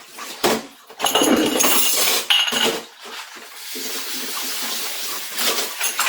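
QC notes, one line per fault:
Throughout, generation loss: a swirly, hollow, smeared sound with blurred attacks, worse than one encode would give. It's likely been through Opus about seven times, requantised on a shifted frame grid each pass. This fits 64 kbit/s, with content still reaching 20.1 kHz.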